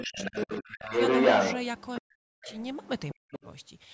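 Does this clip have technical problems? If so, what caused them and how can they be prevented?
Yes. Between 0.0 and 0.9 s, again from 2.01 to 2.46 s, and from 3.13 to 3.41 s, the speech dips sharply, by roughly 25 dB at first and as much as 40 dB later. This is likely speech suppressed in double talk: with both sides speaking, the echo canceller could not tell the talker from the loudspeaker echo and turned both down. A headset, or a canceller with better double-talk detection, prevents this.

A second voice, most likely the other side's voice leaking through the echo canceller, is audible from 0.06 to 1.55 s, where it sits about 10 dB louder than the talker. Fainter traces follow at 1.78 to 2.0 s, 2.42 to 3.12 s and 3.32 to 3.47 s, some 10 to 20 dB below the speech. This is a separate voice running alongside the talker, not a delayed repeat of the talker's own speech as in a room echo. 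Lowering the loudspeaker volume or using headphones prevents it. The audio's ceiling at 8 kHz is expected in call processing.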